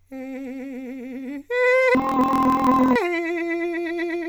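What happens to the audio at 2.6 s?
At 2.6 s, the music sits inside a stretch from 1.95 to 2.98 s where interleaved audio is being read as planar. Each 24 ms block's alternating samples are split into halves, so the music plays an octave low, doubled and choppy at 41.7 Hz.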